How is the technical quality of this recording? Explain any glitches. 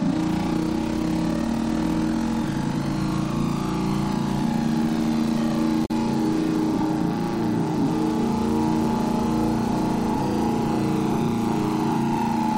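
There's one glitch, and it's a short one. From about 5.85 to 5.91 s, roughly 60 ms, you get damaged data in the compressed stream: a stretch of the encoded file was corrupted, so the decoder misread those frames, lost its place, and had to hunt for the next valid frame header before it could pick up again. What comes out is a brief glitch where the audio briefly turns into garbage before it snaps back.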